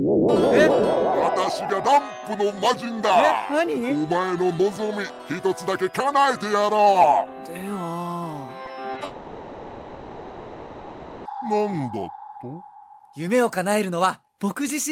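Brief smears or wobbles break the sound at 8.65 to 8.69 s, 8.93 to 8.97 s and 8.99 to 9.03 s. This is short concealed packet loss: each time about 20 ms failed to arrive, and the receiver bridged the gap by extending the preceding sound before blending back.

From 9.05 to 11.27 s the sound turns into a continued, fading buzz or hiss, then resumes with that stretch gone. This is likely a long network dropout, with about 2.2 s never received and filled by the receiver.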